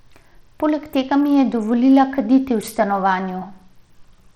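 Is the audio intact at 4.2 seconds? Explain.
No. At 4.2 seconds the speech carries damage that runs through the whole clip and sounds like Bluetooth SBC compression, likely from a low bit pool, which fits a rate near 80 kbps. The weaker upper sub-bands get too few bits, so the treble flickers and a gritty, aliased edge sits on the sound. A spectrogram would show patchy, blocky high bands that come and go, with nothing above 18.8 kHz.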